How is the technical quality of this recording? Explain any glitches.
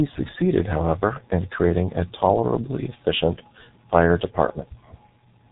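Poor: the whole recording carries heavy narrowband codec damage. Throughout, the speech sounds muffled and hoarse, with smeared consonants and nothing above 3.8 kHz. That points to the G.723.1 codec at roughly 6 kbit/s. Its long 30 ms frames and slowly updated voice model blur fast articulation into rough, dull speech.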